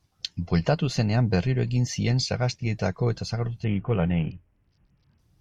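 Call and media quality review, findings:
3.64–5.19 s: treble dulls and gritty noise rises, with no gaps. Bluetooth SBC bit pool drop, fitting a bit pool near 6; top sub-bands starved. Unlike packet loss, there are no dropouts.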